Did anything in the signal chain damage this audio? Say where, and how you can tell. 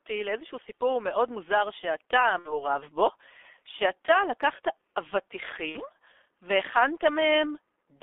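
Yes. At the codec stage, the G.723.1 codec's heavy compression runs through the whole clip. The speech is confined to roughly 300 Hz to 3.5 kHz and sounds muffled and hoarse, with smeared consonants, which fits a low-rate coder near 6 kbit/s with long frames and a slowly updated vocal model.

At the network stage, VoIP packet loss concealed by the speech codec appears at 2.39–2.66 s and 5.69–5.82 s. Each event begins with roughly 60 ms of fading extrapolated sound, consistent with two lost 30 ms frames, and the speech stays weak or distorted for a while after it, as the decoder rebuilds its state.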